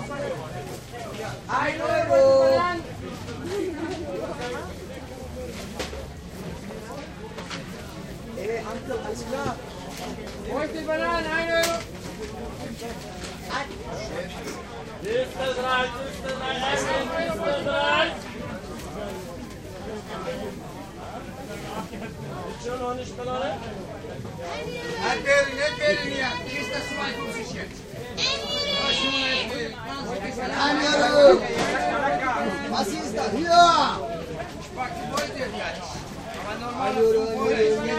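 Current drawn by the USB bus in 1 ms frames is leaking through the power or ground into these sounds, producing USB whine for the whole clip: a fixed-pitch tone at 1 kHz with harmonics, strongest at 15 kHz, sitting roughly 45 dB below the sound.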